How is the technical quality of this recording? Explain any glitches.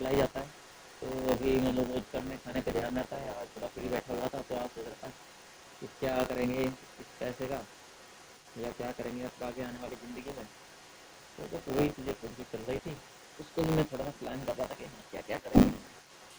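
The recording has three technical problems: a buzz that runs through the whole clip, a faint second voice in the background, and one brief dip near the end.

Buffer tearing runs from start to finish as a rattling, robotic buzz at 100 Hz. The program writing the playback ring buffer and the hardware reading it have drifted so their positions cross inside each period. About a tenth of every block repeats audio roughly 20 ms old, with a hard seam at each edge. The 100 Hz rate fits a 10 ms period. Unlike mains hum, this buzz disappears in pauses and exists only while there is signal.

The other side's voice leaks through for the entire clip. A second voice sits about 25 dB below the main talker. The likely cause is that the talker's device plays the far end on a loudspeaker and its echo canceller did not fully remove that sound from the microphone. This differs from room noise or crosstalk from another source because it is a recognisable voice.

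Speech is suppressed in double talk from 15.42 to 15.52 s. The main voice sinks by up to about 15 dB for roughly 100 ms. This likely happened because both sides spoke at once, so the echo canceller could not tell its own talker from the loudspeaker echo and turned everything down. Unlike a packet dropout, the voice dips rather than going silent, and the dip coincides with the leaking far-end voice.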